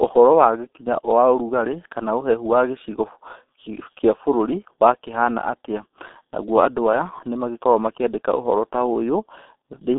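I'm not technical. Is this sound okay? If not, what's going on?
No. From start to finish, the speech has passed through the G.723.1 codec, an early internet-telephony format that squeezes the audio very hard. It keeps only a narrow phone-line band, roughly 250 Hz to 3.7 kHz, with nothing above 3.8 kHz, so the voice sounds muffled and boxy. The damage here is heavy: the codec rebuilds the voice from a coarse model that changes slowly, which leaves it hoarse and smears crisp consonants together.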